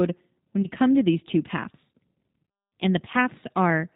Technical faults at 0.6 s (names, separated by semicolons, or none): G.729 codec; VoIP packet loss concealed by the speech codec